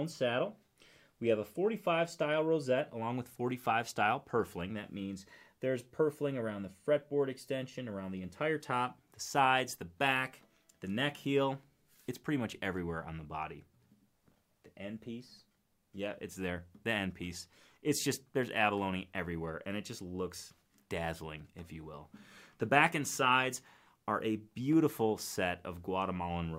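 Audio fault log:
No faults detected; nothing to log.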